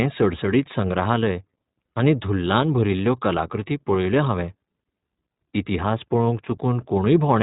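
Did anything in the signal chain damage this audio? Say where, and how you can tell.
Yes. The damage comes from the codec stage and runs through the whole speech clip. It sounds like an iLBC codec. Nothing reaches above 4 kHz, so the sibilants lose their edge and the speech sounds boxed in. The voice has a plainly audible rough, synthetic grain. iLBC codes each frame's excitation on its own, without building on the previous frame. The texture fits 20 ms frames at a rate around 15.2 kbps.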